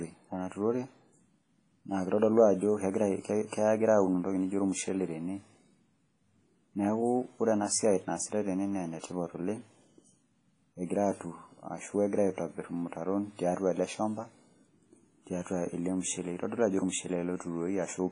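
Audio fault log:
throughout: WMA compression. The speech was likely passed through a heavily strained transform codec, fitting a rate near 24 kbps. Weak spectral lines are discarded and nothing remains above 10.5 kHz, so it sounds dull, ringing and washy, with hiss breathing alongside each syllable.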